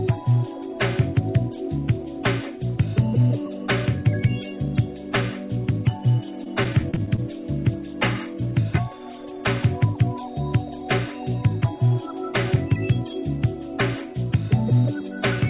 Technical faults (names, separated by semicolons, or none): repeated packet loss (robotic sound)